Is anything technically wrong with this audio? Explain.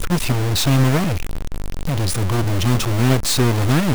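Yes. Throughout the speech there is a harsh, buzzy distortion, and the pauses fill with steady noise instead of going quiet. The likely cause is a stuck bit: one data line held fixed, shifting about half the samples by a step of about -20 dBFS.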